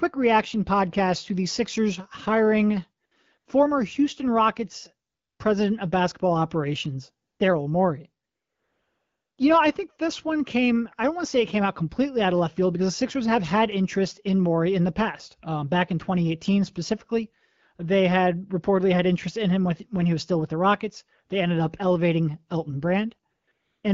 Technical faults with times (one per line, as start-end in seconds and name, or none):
3.05-3.11 AMR comfort noise
3.37-3.45 AMR comfort noise
5.09-5.39 AMR comfort noise
7.27-7.39 AMR comfort noise
8.25-9.37 AMR comfort noise
23.33-23.83 AMR comfort noise